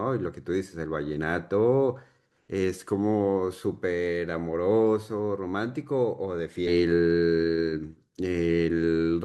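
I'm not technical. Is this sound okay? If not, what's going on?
No. Around 6.67 to 6.70 seconds there is a stream segment skipped: the stream likely failed to load one chunk of the recording, and the player moved on to the next. The speech suddenly jumps ahead with a brief blip, and a piece of it is lost.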